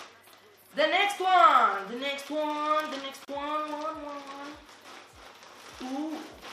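At 3.25 s a gap at a join of encoded pieces opens: a gap of about 31 ms, lasting to 3.28 s, with smeared edges. Separately encoded segments were butted together untrimmed, leaving encoder start delay and final-frame padding in place, and the sound resumes where it stopped.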